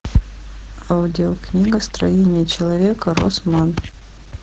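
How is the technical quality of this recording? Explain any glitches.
The quality is poor. Heavy Opus voice compression runs throughout. The speech-only coder keeps sound below 8 kHz and codes it coarsely, fitting about 10 kbps. Speech sounds muffled, hoarse and slightly robotic.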